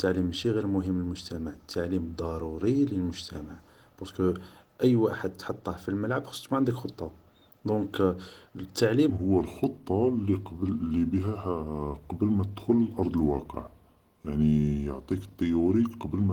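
From the start, the speech carries plainly audible coding damage: it sounds hoarse and grainy, and the overall texture is rough and muffled, although content still extends up to 20.1 kHz. This is likely Opus compression in its hybrid speech mode, and the sound fits a rate near 16 kbps.

At 9.10 s, the section at the wrong speed begins and runs to the end of the clip. Playback drops to 0.814 times the original rate, so the speech becomes slower and deeper, roughly four semitones down. Timing and pitch shift together, which points to a playback or edit likely running on the wrong clock.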